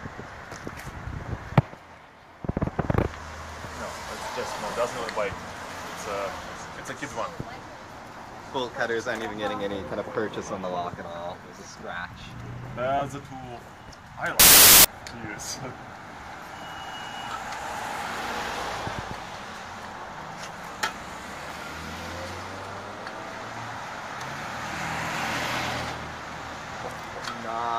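At 14.40–14.85 s, wrong sample width: 24-bit data read as 16-bit. Loud noise buries slowed, lowered sound (0.667 speed), and the spectrogram fills broadband.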